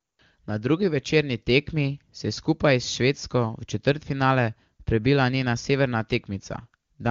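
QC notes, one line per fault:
Nothing to log on this one: the speech passes through the AMR wideband (HD Voice) codec at what sounds like one of its higher rates, and there's no fault anywhere in it.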